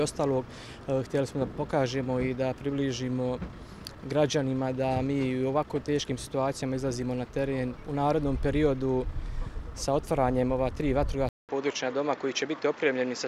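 Input switched to a poorer device, from 11.29 s to the end: a gap of about 200 ms opens at 11.29 s, and when the sound returns it is duller, with nothing above 7.6 kHz, plus a faint new background noise well beneath the signal. The overall level stays about the same. The likely cause is the recording path changing its input mid-capture to a narrower-band microphone or headset profile, which brings its own tone and noise floor.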